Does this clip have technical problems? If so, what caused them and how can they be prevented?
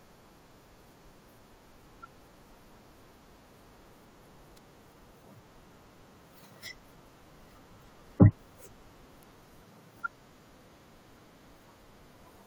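Yes. Damaged data in the compressed stream: a few frames arrived with corrupted bytes, so the decoder misread them, lost sync and hunted for the next frame header. Each glitch comes out as a brief disruption in the speech at 1.74, 5.24 and 7.80 s. Checksummed storage and an error-resilient transport keep frames intact.

Electrical switching spike: a nearby switch, motor or static discharge likely arced into the audio line, and the pickup sits on top of the speech as a sharp snap at 4.57 s and again at 9.23 s. Shielded, well-grounded cabling kept away from switched loads prevents it.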